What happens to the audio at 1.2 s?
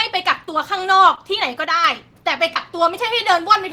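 Around 1.15 to 1.32 s the speech briefly smears and wobbles. This is short concealed packet loss: about 20 ms of the stream arrived too late to decode, and the receiver covered the gap by extending the preceding sound for 14 ms, following its pitch or shaping noise, before crossfading back into genuine audio. The patch stretches the timing slightly, adding around 10 ms.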